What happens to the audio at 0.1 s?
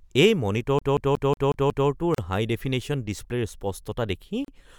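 Nothing goes wrong at 0.1 s; the audio runs through that moment intact, with no dropout, click or other fault.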